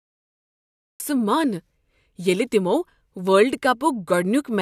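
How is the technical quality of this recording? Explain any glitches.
There's one real problem here, right at the top. The first second is pure digital silence, then at 1.0 s the speech just slams in mid-sound. That's a cut-off start: the recording or stream kicked in late, so there's no natural attack or lead-in. The first syllable arrives already under way.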